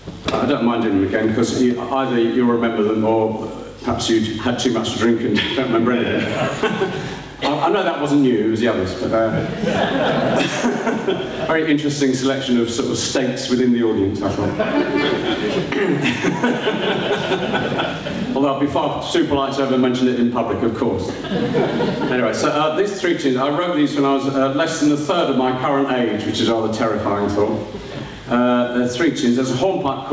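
All the way through, there's gain pumping: the level swings by roughly 15 dB under each loud sound, so everything sits squashed. Likely cause is the mic gain set way too high, with a fast limiter clamping down. Top end stops at 8 kHz, as a G.722 call path would.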